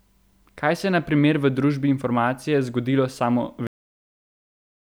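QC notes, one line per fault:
3.67–4.98 s, cut-off end: the speech stops mid-sound at 3.67 s and drops straight to digital silence with no decay for the last 1.3 s, because the final buffers of audio were never written or played out.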